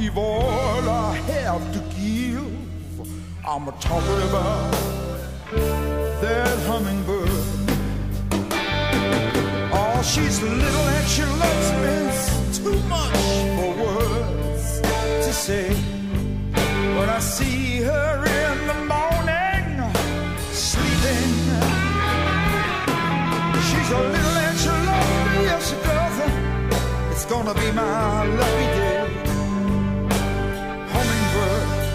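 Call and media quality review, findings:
No faults found on listening. Nothing in the audio calls for a ticket entry.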